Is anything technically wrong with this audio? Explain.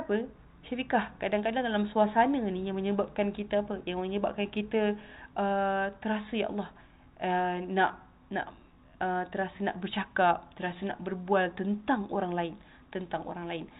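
No, nothing's wrong here: it sounds like an ordinary phone-style call through a G.711 mu-law link at 64 kbps, so the top end stops around 4 kHz as you'd expect from that codec, and that's just how the path normally sounds.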